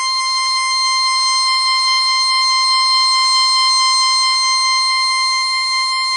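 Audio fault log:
Throughout: WMA compression. The music sounds washy and ringing, with a hiss that swells and fades with the signal. Nothing is present above 10.1 kHz, so the top end is dull and closed in. Attacks smear, because quantisation noise spreads across long transform blocks instead of staying with each sound. Weak detail drops out where faint components are zeroed. The damage is plainly audible and fits a low bitrate near 32 kbps, likely from a WMA encode.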